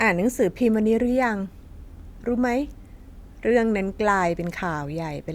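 No technical faults are audible.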